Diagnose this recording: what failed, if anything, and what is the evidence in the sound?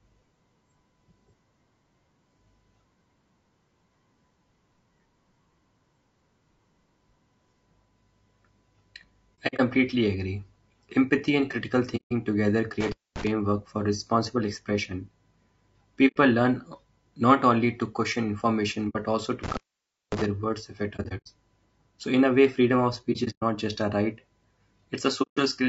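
The speech is rough and grainy throughout, with noise filling the gaps between harmonics and a thin, synthetic-sounding top band. This points to the codec stage, likely low-delay AAC compression (AAC-ELD) at a low bitrate, consistent with about 32 kbps. Its short frames resolve pitch poorly and leave too few bits.

Soft-edged holes fade out and back in at 9.47–9.60, 11.96–12.12, 16.07–16.17 (just before "learn not only to"), 18.89–18.96, 20.96–21.27, 23.12–23.43 (between "a way freedom of" and "just a right") and 25.22–25.38 s. This is AAC frame loss with muting, a network-stage fault. The decoder zeroes the missing frames, and the overlapping windows taper the edges. The gaps total 60 to 180 ms each, and some are broken into short runs spread across about 300 ms.

Two dropouts have crackle at their edges and leave faint hiss while the sound is gone: 12.81–13.27 s, just before "for responsible expression", open for about 240 ms, and 19.44–20.26 s, open for about 550 ms. 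This is intermittent contact in the analogue wiring, a loose cable or plug momentarily breaking the signal path.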